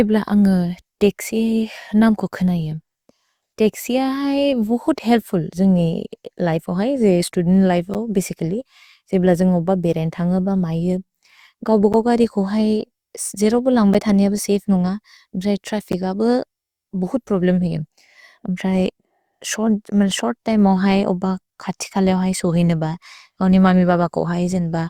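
Between 7.94 and 15.93 s, periodic USB or driver dropouts cut about five gaps into the speech, exactly 2.0 s apart. A stalled bus or driver drops roughly 10 ms each time, filled with silence, heard as ticks. Their strict regular spacing separates them from random network packet loss.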